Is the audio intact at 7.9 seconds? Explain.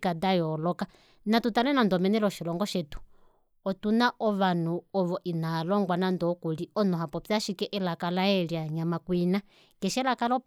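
Yes, at 7.9 seconds the speech is intact, with no dropout, click, distortion or other fault at that point.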